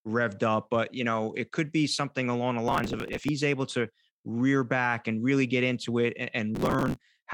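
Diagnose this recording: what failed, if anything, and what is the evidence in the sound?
Processor overload crackle in the driver buffer stage, 2.68 to 3.29 s and 6.55 to 7.01 s. Missed deadlines skip tiny few-millisecond chunks, so the speech tears.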